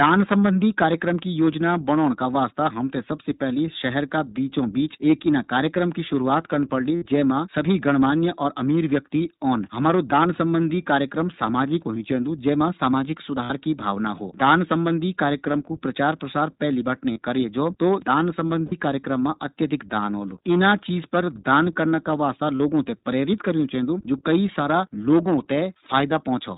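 The whole speech track has gone through the iLBC codec, plainly audible as a slightly rough, synthetic tone with nothing above 4 kHz, which fits its 15.2 kbps, 20 ms-frame mode. Then come lost iLBC frames at 6.96, 13.44 (after "चैन्दू जै मा सामाजिक", before "की भावना हो"), 15.52, 17.12 (after "प्रचार प्रसार पैली बीटी"), 18.66, 20.70 and 22.56 s (after "दान करना का वास्ता"). Each is 20 to 60 ms of held, buzzy repeated pitch, and the sound snaps back at once.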